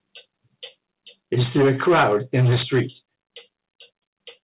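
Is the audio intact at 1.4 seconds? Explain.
No. From 1.37 to 2.81 s the sound shows microphone overload, likely from input volume set too high, driving peaks about 11 dB past the converter's limit so that roughly a sixth of the waveform is flattened. The result is a harsh, crackling edge on the loudest moments. Unlike codec distortion, it follows signal level and is worst on peaks.

At 1.43 s there is also a microphone volume step down of 3 dB, likely the call software reacting to that clipping. Sound and background both drop together in one instant, which sets it apart from a gradual fade or from the speaker simply getting quieter.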